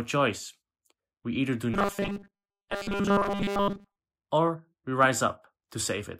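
Speech clip with robotic sound from repeated short buffers between 1.74 and 3.98 s. The voice becomes a rigid metallic buzz at 200 Hz, which fits a 5 ms chunk replayed over and over, most likely because new audio was arriving too seldom and most of it was skipped.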